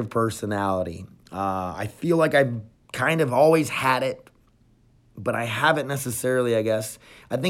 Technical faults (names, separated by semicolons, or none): none